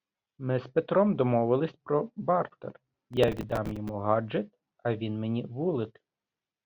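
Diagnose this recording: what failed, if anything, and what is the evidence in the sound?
The fault sits in the driver and buffer stage. Processor overload crackle tears through the speech from 3.13 to 3.89 s, right after "домовились про бартер". A run of short buffers, a few milliseconds each, missed their deadlines. Each replayed stale audio with hard edges, heard together as gritty crackle.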